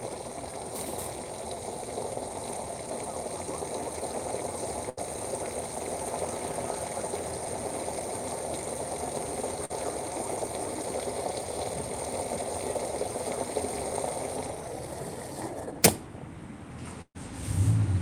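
At 4.89 s a burst of packet loss drops about 80 ms of audio. The receiver stretches the last sound across the gap and fades it. The result is a brief held buzz or hiss, and then the sound jumps ahead.

From 9.65 to 9.71 s, short concealed packet loss removes about 40 ms. The decoder patches the hole by extending what came just before, then blends back in. It is heard as a quick smear or wobble.

From 17.01 to 17.17 s a second burst of packet loss loses about 140 ms. The concealment fades out fully, leaving about 70 ms of silence before the audio resumes further on.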